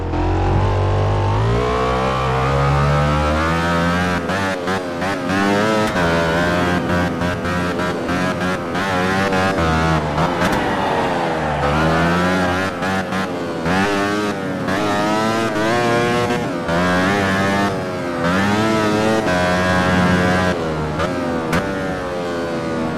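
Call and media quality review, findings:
No call or media quality findings to report for this clip.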